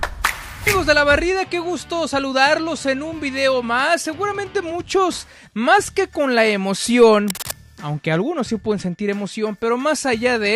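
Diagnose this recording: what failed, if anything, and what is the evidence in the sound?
A burst of scratching, rustling noise sits over the sound from 7.28 to 7.53 s, roughly 10 dB below the signal. This is cable scratch noise, likely from a worn cable or connector in the analogue wiring being moved, its contact resistance fluctuating rapidly.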